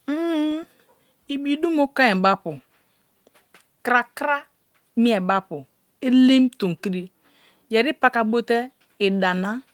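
No faults found in this speech; the Opus voice coding at 24 kbps runs in hybrid mode with fullband bandwidth, and its damage is light.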